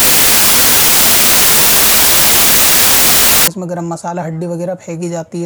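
From 0.0 to 3.48 s the audio has a wrong sample width fault: the data were read with a different number of bytes per sample than they were written with, which fits packed 24-bit samples being read as 32-bit. Each value mixes bytes from neighbouring samples, so only some keep the real signal's top bits. The result is loud noise with the original buried inside, running fast and high at about 1.33 times normal speed.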